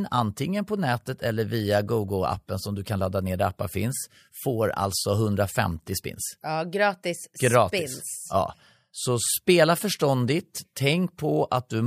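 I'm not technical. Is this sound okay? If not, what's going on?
Yes, nothing stood out as a problem when I listened to this recording.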